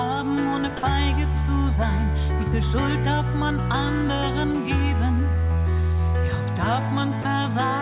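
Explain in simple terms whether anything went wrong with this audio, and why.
Twice, the sending side most likely judged the sound to be background and briefly stopped transmitting, the fault known as sound dropped by the voice detector. The receiving end filled each gap with soft comfort noise. You hear the sound give way to a faint hiss from 0.77 to 0.83 seconds, and again from 7.22 to 7.25 seconds, before it returns. Both gaps are very short, under a tenth of a second.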